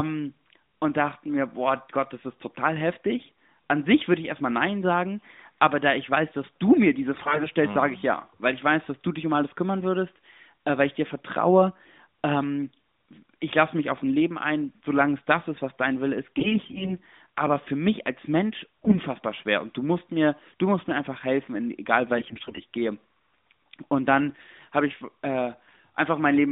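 AMR bit errors hit this speech clip at 7.14–7.47 s, 16.38–16.98 s, 18.85–19.01 s and 22.18–22.61 s. Corrupted at a rough 15–20% bit error rate, weakly protected frame bits misplace the excitation pulses and skew fine pitch, gain and spectral values, so the voice turns hoarse, scratchy and gargly over the narrowband AMR line, which fits its 12.2 kbps mode.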